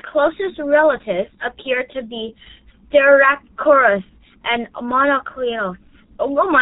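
Speech, coded throughout with the G.723.1 codec, heavily damaged. On a spectrogram, energy stops flat at 4 kHz and consonants smear into coarse 30 ms blocks. The slow-updating voice model leaves it muffled and hoarse, which fits a rate near 6.3 kbit/s.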